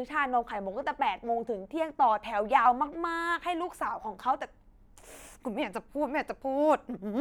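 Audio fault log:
No technical faults are audible anywhere in the speech signal.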